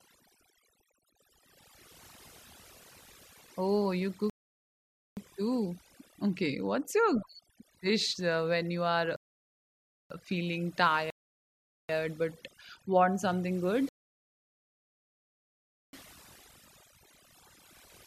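It's a speech recording with overdone noise removal running the whole way through: the reduction was pushed so hard that bands near its noise estimate get pulled down or switched off, so the background drops and breaks up into twinkly specks. There are also four rebuffering stalls, where playback runs dry, goes silent, then picks up exactly where it left off: 4.30 to 5.17 s, 9.16 to 10.10 s, 11.10 to 11.89 s, and a long one from 13.89 to 15.93 s that adds about 2.0 s.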